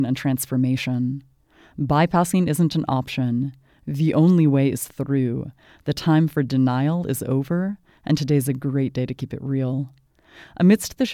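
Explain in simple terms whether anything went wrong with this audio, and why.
Nothing went wrong here: the speech signal holds steady the whole way, with no breaks, jumps or damage anywhere in the recording.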